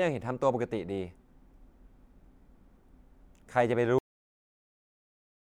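At 3.99 s the speech hits a cut-off end. The final buffers were never written or played out. The sound stops mid-syllable and falls straight to digital silence. There is no natural decay. That silence runs to the end of the clip.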